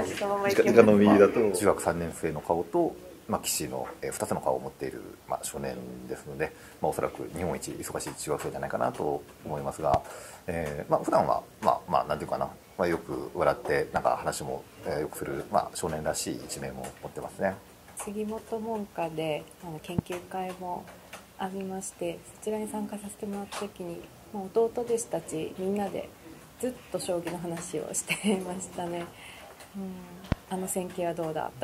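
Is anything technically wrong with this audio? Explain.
Yes. Four loud pops sit on top of the sound, at 9.94–9.96 s, 13.96–13.99 s, 19.99–20.01 s and 30.32–30.34 s. Each is a single sharp click, roughly 10 to 20 dB above the sound. The likely cause is a brief voltage pulse, such as static or a switching glitch, while the sound continues underneath.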